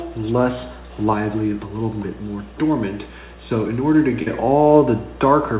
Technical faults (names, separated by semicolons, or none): short concealed packet loss